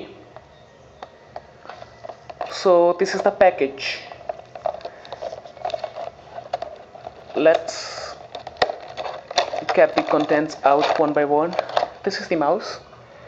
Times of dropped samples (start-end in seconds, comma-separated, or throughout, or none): 2.50, 7.20